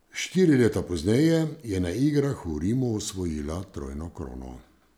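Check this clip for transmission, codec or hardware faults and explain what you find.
A fault runs through the whole recording. The quiet stretches of speech sound grainy and rough, with a fizzy distortion that rises and falls with the voice rather than sitting underneath it as steady hiss, and the softest tails break up instead of fading cleanly. The likely cause is low bit depth without dither: the samples were truncated to a coarse grid, which fits about 10 bits. With no dither, the rounding error tracks the signal, sitting very roughly 50 dB below it.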